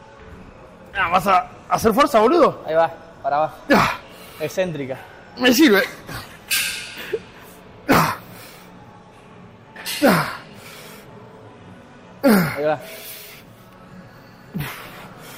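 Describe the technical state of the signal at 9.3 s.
At 9.3 s the signal is intact, with no dropout, distortion, glitch or other audible fault at that point.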